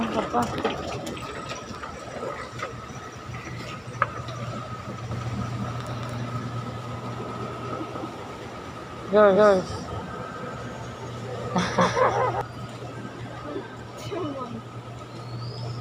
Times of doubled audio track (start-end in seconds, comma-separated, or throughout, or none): 5.11-12.41